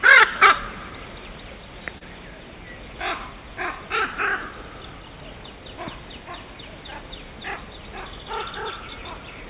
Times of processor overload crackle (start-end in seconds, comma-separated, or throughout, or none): none